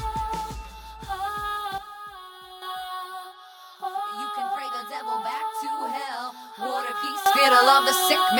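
At 1.78 s the music and its background noise drop together by about 9 dB in an instant, staying low until 2.62 s. At 7.26 s both leap up by about 12 dB and stay there to the end. Each is a sudden gain jump, most likely a digital gain setting applied from one sample to the next with no ramp, so everything in the signal shifts level at once.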